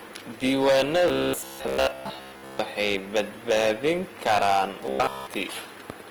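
A speech recording pushed about 13 dB past what the signal chain could pass has hard clipping throughout: roughly 4 percent of samples hit the ceiling and are cut flat, so every louder syllable carries a harsh, crackling fuzz from the added high harmonics. Over the whole clip there is also a rough, grainy texture on the voice that points to Opus compression in its music (CELT) mode, likely at a low rate around 24 kbps. The full bandwidth survives, with content reaching 20.2 kHz, but tones sound noisy rather than clean. From 1.08 to 2.59 s, just before "badbaadin karaan", and again from 4.86 to 5.27 s, just after "badbaadin karaan", new audio was likely arriving too seldom. The playback filled the gaps by repeating short chunks, which fits a 15 ms buffer. Most of the sound in these stretches is repeated rather than new, and this produces robotic sound from repeated short buffers: a rigid metallic buzz at 66.7 Hz that only loosely follows the speech.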